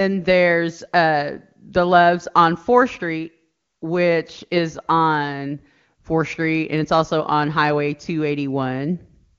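Nothing here stands out as a fault: the speech comes across the AMR wideband (HD Voice) link at 23.85 kbit/s, the codec's top rate, which leaves at most a faint trace of coding.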